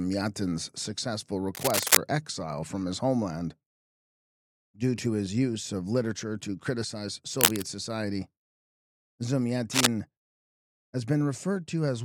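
Cable scratch noise at 1.55–1.98 s, 7.38–7.65 s and 9.71–9.87 s: dense rustling bursts around 5 dB above the sound, likely from a worn connector's contact being disturbed.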